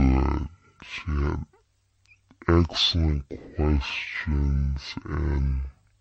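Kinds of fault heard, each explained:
Stereo read as mono: the player took a two-channel stream and treated its interleaved left and right samples as one long single-channel sequence, so each stereo frame became two consecutive mono samples. Playback runs at 0.5 times the intended speed and the speech drops 12 semitones, a full octave, sounding slow, stretched and unnaturally deep throughout the clip. A fainter mirror image of the sound also sits in the upper half of the spectrum.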